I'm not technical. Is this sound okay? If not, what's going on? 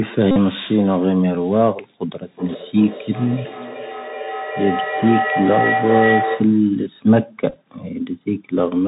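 No. Three separate problems can be heard.

Throughout, the speech has the sound of the Bluetooth CVSD headset codec, the basic phone-headset mode. Everything above 4 kHz is gone, so it sounds muffled and boxy, s sounds turn scratchy, and a grainy hiss sits underneath. Unlike the other faults, this never stops.

From 0.31 to 0.37 s, and again from 7.50 to 7.56 s, there is a Bluetooth headset packet repeated fault. Bits of sound went missing between headset and phone, and the chip replayed the last scrap instead. That gives a brief, rough buzz, and the second time it comes in short broken patches. Each lasts well under a tenth of a second and doesn't build up.

From 2.23 to 6.7 s there is feedback howl. Two devices in the same room are on the call, so the sound loops from loudspeaker to microphone and gets louder each time around. It becomes a steady ringing tone around 700 Hz, pulsing roughly two or three times a second and almost as loud as the speech. 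Unlike the short buzzes, it grows and lasts several seconds.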